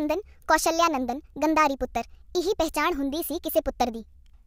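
A wrong sample rate runs from start to finish. The speech plays back 1.38 times faster than it was captured, and because nothing resamples it, the pitch rises with the tempo by about 5.5 semitones. Every voice sounds high, thin and hurried, with syllables crowded together. That ratio fits audio recorded at 32 kHz being clocked out at 44.1 kHz, so each second of the original passes in well under a second.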